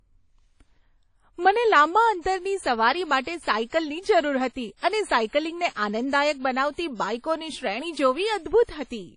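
From start to end, the speech carries audible codec damage, most likely WMA compression at a low rate that fits a 32 kbps encode. Long transform blocks smear quantisation noise around each syllable, so consonants ring and vowels sound washy, with a hiss that swells and fades with the voice. On a spectrogram, everything stops sharply at 10.1 kHz, and weaker components between the stronger bands appear as blank gaps.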